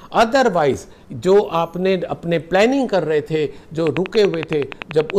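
The audio capture likely suffered a dropped buffer (overrun) at 0.74 s and again at 3.58 s. Each time, a few milliseconds were lost and the two sides were spliced together, giving a jump in the sound. From 3.87 s to 5.11 s, a train of clicks, likely from interference or a faulty connection, puts around fifteen similar pulses over the audio at a regular 10.6 per second, standing well above the signal.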